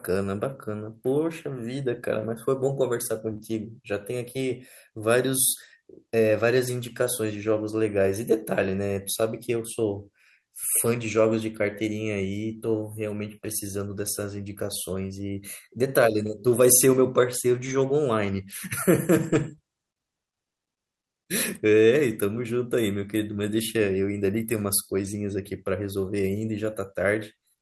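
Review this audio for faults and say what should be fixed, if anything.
Lost packets rebuilt from error correction occur at 3.29 to 3.31 s and at 3.41 to 3.43 s. Each spans 20 ms, about one packet's worth. The packet that followed each loss carried a low-bitrate backup copy, and the decoder played that copy instead. So there is no gap. Those two short stretches sound rougher and noisier than the audio around them. Prevention: reduce network loss on the path, for example with a wired link or better queue management.

Short concealed packet loss follows at 3.33 to 3.37 s and 3.37 to 3.41 s. These are two back-to-back holes of about 20 ms each. No backup copy reached the decoder here. The receiver extended the preceding sound, from its pitch or as shaped noise, then blended back into the real signal. The result is a brief smear and wobble between the two rebuilt spots. Prevention: cut the burst loss at its source and allow a slightly deeper jitter buffer.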